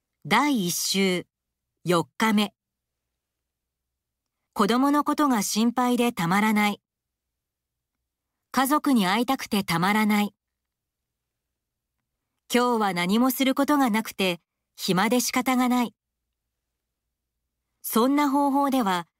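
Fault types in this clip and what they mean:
No technical faults can be heard anywhere in the speech recording, with the signal holding steady and continuous throughout.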